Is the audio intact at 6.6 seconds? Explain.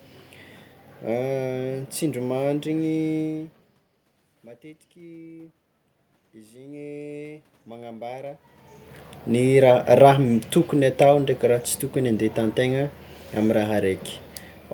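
No. From 6.49 to 8.48 s, automatic gain rising is under way: the input dropped by about 19 dB, so the gain control raised its gain gradually, by about 5 dB over two seconds. Voice and background noise swell together through that span.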